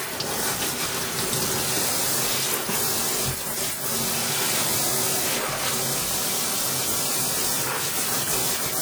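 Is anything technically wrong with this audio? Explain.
Yes. Throughout the clip the sound has a ringing, washy quality, with a hiss that swells and recedes along with the signal and plainly audible smearing around changes. This is likely WMA compression. The transform codec's long blocks spread quantisation noise across tens of milliseconds, so it blurs transients and breathes with the level, and the damage fits a low bitrate near 48 kbps, even though content still reaches about 20.1 kHz.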